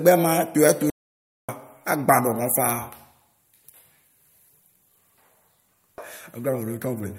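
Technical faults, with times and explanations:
0.90–1.49 s, playback stall: the speech cuts to silence mid-flow for about 585 ms, then carries on from where it stopped. The player most likely ran short of buffered data or had its output thread blocked, so nothing reached the output until it recovered.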